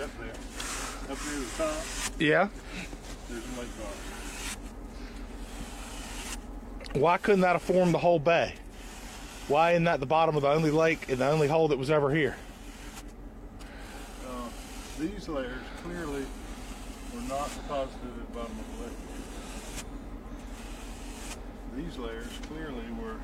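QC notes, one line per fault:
No faults were heard anywhere in the clip. Nothing in the audio called for a timed entry.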